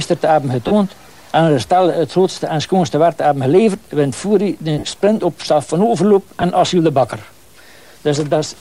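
Lost LE Audio frames cause three brief gaps. The first runs from 0.67 to 0.72 s, and the second from 4.79 to 4.83 s. Each lasts about 37.5 ms, which fits five lost 7.5 ms frames. The LC3 decoder fills these gaps by repeating the last spectrum with scrambled signs, so tones turn into a short noisy smear. The third, at 6.42 s, is a single lost frame. The light codec compression leaves at most a faint watery texture.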